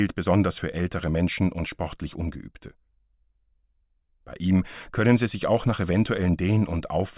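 No technical faults can be heard anywhere in the signal, with nothing in it pointing to a problem in how the audio was captured, processed or delivered.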